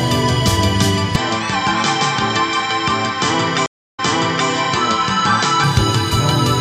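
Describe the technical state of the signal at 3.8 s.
At 3.8 s the signal is dropped out entirely. From 3.66 s the audio cuts to silence for about 0.32 s, then comes back at a point roughly half a second earlier than where it broke off, so a stretch already heard is played again. This is a stream reconnect: the connection failed, the player went quiet, reconnected and started a new decoder, and the server resent a burst from before the break. The disturbed section runs until 4.49 s.

Underneath, the whole span from 1.16 s to 5.64 s sounds dull and boxy. Nothing reaches above 8.1 kHz, and a new background noise sits roughly 35 dB below the signal. The loudness stays the same, and there is no gap where the tone changes. The likely cause is the input switching to a poorer device, such as another microphone or a headset in its call mode. That device passes a narrower band and adds its own tone and noise floor.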